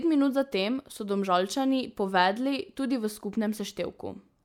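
Listening to this speech recording, nothing stood out as a technical problem at any point.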